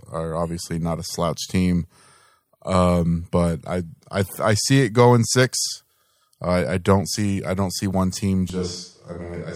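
A switch to a distant microphone occurs at 8.50 s, right after "don't see one team", and lasts to the end. The sound turns abruptly roomy and hollow, thinner in the bass, about 5 dB quieter, with faint room noise. The likely cause is a failed close microphone.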